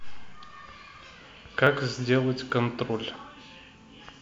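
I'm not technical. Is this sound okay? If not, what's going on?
No, not quite. There are three tiny skips in the speech, at 1.67, 2.50 and 3.41 seconds, where the sound jumps forward a touch instead of flowing smoothly. That's most likely a dropped buffer (overrun): the recording software fell behind for a split second, so a small slice of audio got overwritten before it was saved, and the two ends were stitched together. Only a few milliseconds go missing each time, so the sound skips ahead rather than going silent.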